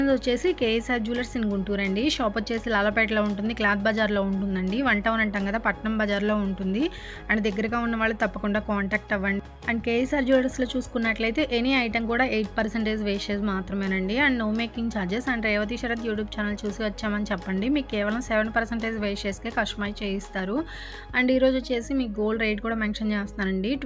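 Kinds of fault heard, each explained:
Nothing stood out as a fault on listening to this audio.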